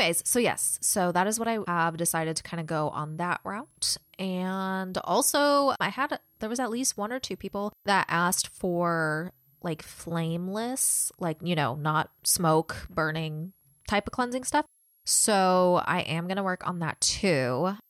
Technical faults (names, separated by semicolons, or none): switching supply whistle